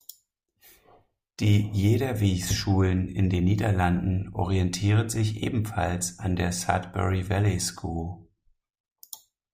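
A speech recording with no technical faults to report. There is nothing here that needs a time or a cause.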